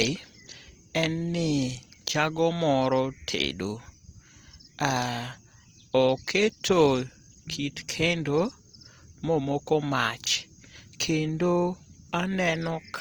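From start to finish the speech carries plainly audible Opus compression damage. It sounds rough and grainy because starved bands are filled with folded or noise-like energy instead of being left as holes, so it swirls less than MP3 would. Bandwidth stays full to about 20.2 kHz, which fits a CELT-mode stream at around 24 kbps, the likely cause.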